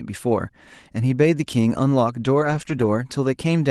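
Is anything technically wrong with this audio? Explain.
Yes: between 2.41 and 2.87 s there's a lost packet rebuilt from error correction. Opus's low-bitrate backup copies filled about 240 ms of dropped audio, so there's no gap, but those stretches sound rougher and noisier. It's riding a call path topping out around 12 kHz.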